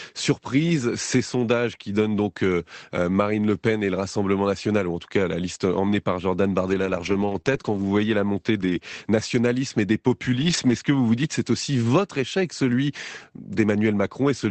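Lost packet rebuilt from error correction, 5.87–5.93 s, just after "tout cas la liste": the following packets carried low-bitrate copies of the missing audio, and the decoder played those instead of leaving a gap. The same rebuilding recurs at 6.69–7.39 s, 7.46–7.60 s, 7.65–7.83 s (ending just before "voyez la montée"), 8.61–8.71 s and 10.41–10.71 s, just after "nationalismes et des". Each stretch sounds rougher and noisier than its surroundings, and the one around 7 s is the longest.

Short concealed packet loss, at 7.41–7.46 s and 7.62–7.65 s: each time about 20 ms never arrived, and no backup copy existed. The receiver extended the preceding sound for a few hundredths of a second, then blended back in. Each fill is heard as a brief smear or wobble within the already degraded passage.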